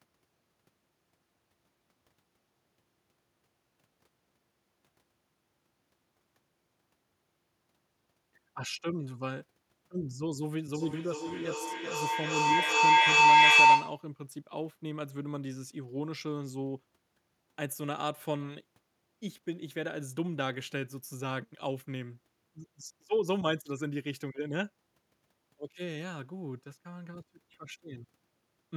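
Feedback howl runs from 10.74 to 14.11 s in this speech clip, peaking about 15 dB above the speech. A microphone and a loudspeaker on the same call are close enough to re-capture each other, and each trip round that loop adds level, so the sound narrows to a tone near 1 kHz. It pulses at roughly 0.4 s intervals, matching the loop's delay, and keeps building until the loop is cut.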